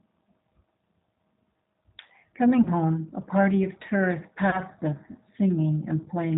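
From start to finish the speech carries the G.729 codec sound, with plainly audible damage. Nothing is left above 4 kHz, and the voice has a slightly rough, synthetic edge, which fits an 8 kbit/s coder that rebuilds each 10 ms frame from a vocal tract filter, a pitch predictor and a few pulses. Plain narrowband filtering would be dull but smooth. This roughness comes from the sparse pulse excitation, not from filtering alone.

At 2.63 s to 2.69 s, and again at 4.50 s to 4.61 s, there is VoIP packet loss concealed by the speech codec. Each gap fits a single lost 30 ms packet. Instead of dropping to silence or clicking, the decoder carries on from its last pitch and filter and lowers the gain, so the sound smears into a brief, stretched, fading sound. The effect outlasts the missing 30 ms, most clearly in the second event. The voice stays weak or distorted as the predictor recovers, which sets it apart from a simple dropout or glitch.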